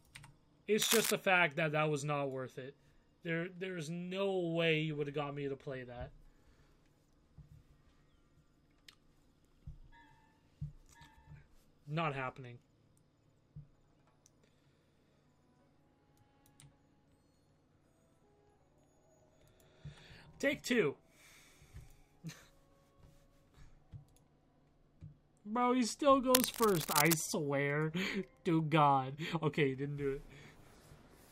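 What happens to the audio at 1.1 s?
At 1.1 s the audio is at the tail of a burst of cable scratch noise running from 0.82 to 1.12 s. A dense, uneven rustling sits over the sound at roughly the same level as the sound itself. The likely cause is a worn cable or connector being moved, which makes its contact resistance fluctuate rapidly.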